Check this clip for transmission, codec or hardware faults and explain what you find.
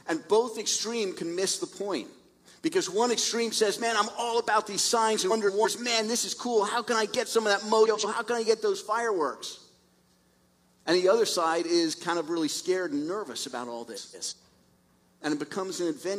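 Three short stretches are affected by frames out of order, at 5.30 to 5.67 s, 7.86 to 8.05 s and 13.94 to 14.33 s. In each, two adjacent runs of coded frames reached the decoder in swapped order and were played that way. The first and third each swap blocks of about 171 ms, which fits runs of four frames. The middle one swaps blocks of about 85 ms, which fits runs of two. Each span plays with its halves exchanged, giving a garbled flutter. No time goes missing.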